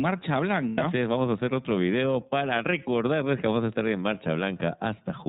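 The speech is coded with the iLBC codec for its whole length. Nothing above 4 kHz gets through, so it sounds narrowband. The coding damage is plainly audible as a rough, slightly synthetic edge. This fits iLBC's 13.33 kbps mode, which uses 30 ms frames.

From 0.69 to 0.82 s, lost iLBC frames break the sound. The decoder hides the gap by repeating the last pitch cycle mixed with noise. It comes out as a short, held, buzzy vowel. This fits three lost 30 ms frames, about 90 ms of missing audio. Because each frame decodes on its own, the speech recovers almost at once.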